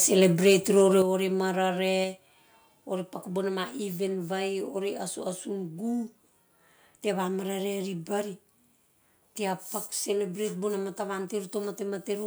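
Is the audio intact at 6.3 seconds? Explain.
Yes, the speech at 6.3 seconds is intact, with no dropout, click, distortion or other fault at that point.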